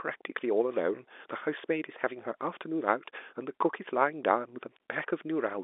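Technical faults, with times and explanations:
Nothing here counts as a technical fault; the speech just comes over a G.711 telephone line, so nothing above about 3.8 kHz gets through, which is simply how that format sounds.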